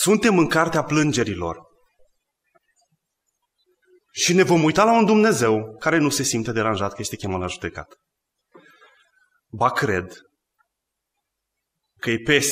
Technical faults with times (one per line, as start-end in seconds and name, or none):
none